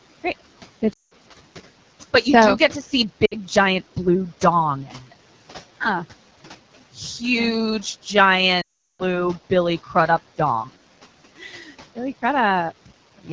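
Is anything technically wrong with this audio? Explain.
Yes. The AMR wideband (HD Voice) codec runs throughout at a low rate. Its pulse-driven vocal tract model leaves the speech plainly rough and raspy, which fits the 8.85 kbit/s mode.

Lost AMR speech frames occur at 0.93–1.13 s, 3.25–3.36 s and 8.62–9.25 s. The decoder repeats its last good settings with falling gain, so the speech smears briefly and then fades toward silence. The longest gap, 0.38 s at 8.62 s, drops to near silence before the speech returns weak or rough.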